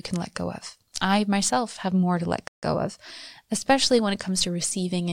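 At 2.48 s, just after "have more to let", a rebuffering stall cuts the speech to silence for 150 ms; the player ran dry of downloaded audio. It resumes at 2.63 s on "of especially when" exactly where it paused, so unlike a dropout nothing is missing, only time added.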